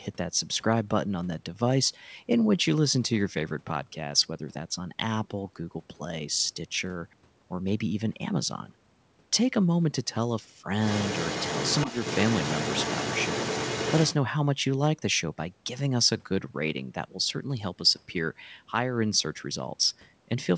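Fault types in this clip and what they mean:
Other side's voice leaking through: From 10.87 to 14.14 s a second voice sits only a few dB under the speech, likely loudspeaker echo the canceller missed.
Speech suppressed in double talk: From 11.86 to 11.91 s, during that overlap, the speech dips briefly by a few dB, likely the canceller turning both sides down.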